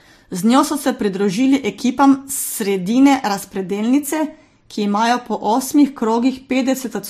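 All the way through, the speech has nothing above 15.2 kHz and layered artefacts from different codecs, likely from transcoding between lossy codecs, something like a low-rate MP3 re-encoded to Vorbis.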